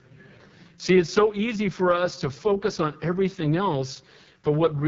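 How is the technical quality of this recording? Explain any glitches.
Technical quality is poor, mainly because the whole speech clip has gone through an AMR wideband (HD Voice) codec squeezed hard. From start to finish the voice sounds rough and raspy, with a gritty, buzzy edge. The bandwidth stops at about 7.4 kHz. That harshness fits the codec's lowest mode, around 6.6 kbit/s. At that rate the pulse-based vocal tract model has too few bits to follow the voice properly, while the band from 6.4 to 7 kHz is filled with shaped noise.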